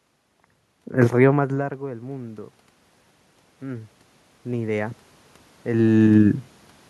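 From 0.71 to 2.55 s, and again from 3.46 to 5.94 s, automatic gain rising follows an input drop of about 23 dB. Gain climbs about 6 dB, then about 5 dB. Voice and room noise swell together.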